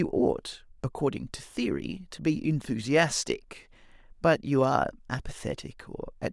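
No technical faults can be heard anywhere in this speech recording, and the signal stays steady throughout with nothing that calls for attention.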